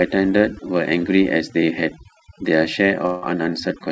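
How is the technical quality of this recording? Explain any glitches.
The technical quality is poor, with two faults. The audio comes through a call link that stops near 8 kHz, which fits G.722 at 64 kbps.

Overdone noise removal runs throughout. An aggressive denoiser muted bands near its noise estimate. The background twinkles with specks.

From 3.06 to 3.33 s, a long network dropout is likely. A decaying buzz or hiss fills about 160 ms. Then the speech resumes, with a similar stretch missing.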